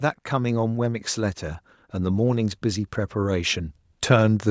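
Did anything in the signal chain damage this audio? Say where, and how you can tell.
Yes. Automatic gain rising runs from 0.30 s to 4.46 s in the call-processing stage: the level climbs by about 7 dB, and speech and background swell together. The AGC judged the input too quiet and raised its gain gradually across the clip.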